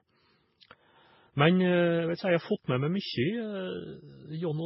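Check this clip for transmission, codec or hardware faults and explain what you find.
One fault is present, lasting the whole clip. The speech sounds dull, with nothing above 5.6 kHz, and carries layered, mismatched swirling and smearing artefacts. Likely cause: transcoding between lossy codecs. It points to very low-bitrate MP3, then Vorbis, then WMA, each re-encoding the previous codec's damage while the lowest cut-off remains.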